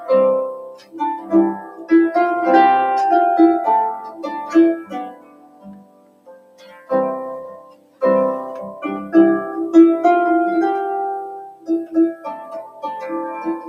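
A noise suppressor built for speech stays active across the whole clip and treats steady, sustained parts of the sound as noise. Its gain rides up and down by something like 20 dB, so sustained material and decaying tails keep getting pulled down while sharp onsets mostly pass untouched. The result is a pumping, fluttering level and a thinned, hollowed texture wherever the sound holds or rings out.

At specific moments the suppressor clamps down harder on sound it has misjudged as noise. The first dip runs from 0.55 to 0.98 s, sinking by about 16 dB. Shorter dips follow at 1.59 to 1.91 s (about 11 dB) and 3.97 to 4.28 s (about 10 dB). The longest runs from 4.8 to 6.92 s, reaching about 17 dB down. Another deep cut, also about 17 dB, spans 7.37 to 8.02 s. Brief dips come at 11.47 to 11.69 s (about 15 dB) and 12.65 to 12.83 s (about 10 dB). Each time, the held sound audibly sags or its decay is chopped off.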